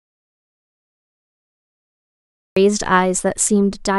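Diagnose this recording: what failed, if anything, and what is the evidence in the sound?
An audio dropout to silence runs from the very start to 2.57 s, with speech only arriving after that. The gap is silent, a flat line on the waveform and blank on a spectrogram with no room tone, most likely from a lost input or mute upstream of the recorder.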